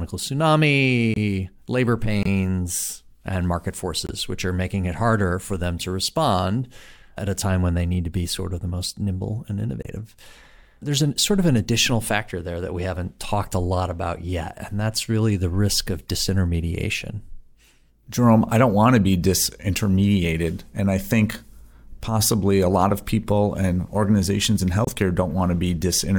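Speech broken by five abrupt silent holes of roughly 40 ms each, at 1.14–1.18, 2.23–2.28, 4.07–4.10 (after "and market"), 9.82–9.87 (after "the most nimble and") and 24.85–24.89 s (after "people and organizations in"): corrupt frame muted, the decoder rejecting damaged compressed frames (one or two each) and substituting silence with timing preserved.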